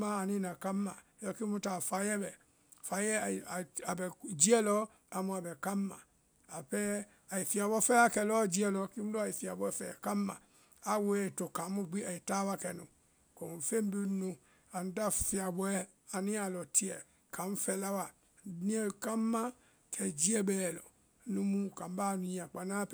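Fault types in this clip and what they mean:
No faults can be heard.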